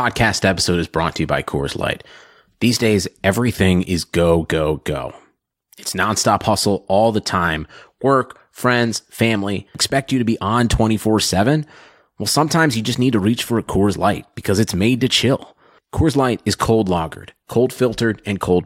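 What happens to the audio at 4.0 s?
Nothing goes wrong at 4.0 s; the speech carries on intact through that moment.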